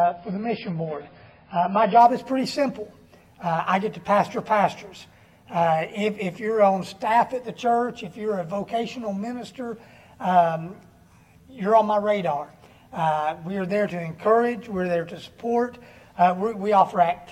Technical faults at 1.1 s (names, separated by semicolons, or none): adaptive stream starting at a low bitrate